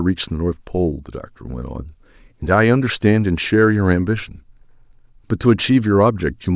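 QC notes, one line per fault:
No audible faults detected.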